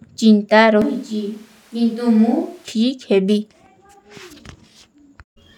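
From 0.82 s to 2.68 s the speech abruptly turns roomy, hollow and thin in the bass, drops by about 5 dB, and picks up room noise roughly 35 dB below it, then snaps back. This is likely a switch to a distant microphone.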